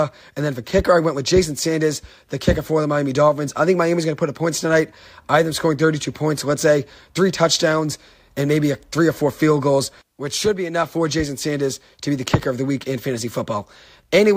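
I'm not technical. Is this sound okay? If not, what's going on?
Yes, nothing in this recording points to a technical problem with how the sound was captured or delivered.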